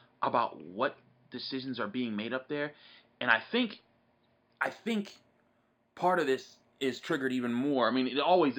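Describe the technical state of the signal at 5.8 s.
Imaging from linear upsampling affects 4.63 to 7.73 s. The speech was raised from about 11 kHz by straight-line interpolation, so the top is dulled and a faint mirrored copy, roughly 30 dB down, sits between 5.5 and 11 kHz, giving sibilants a metallic shimmer.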